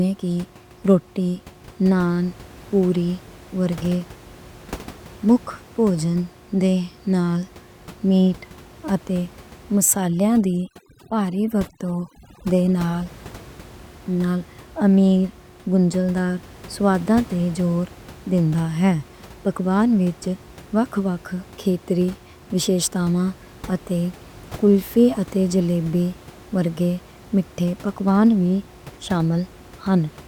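From 9.81 to 13.06 s the speech's softer edges drop away, while the background, elsewhere a steady room noise about 22 dB below the voice, collapses into near silence scattered with twinkling specks. This is overdone noise removal: a noise reduction stage set far too aggressively, muting individual frequency bands whenever they came close to its noise estimate and taking the quieter parts of the speech down with them.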